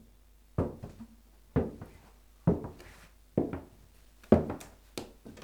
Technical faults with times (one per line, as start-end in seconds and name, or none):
none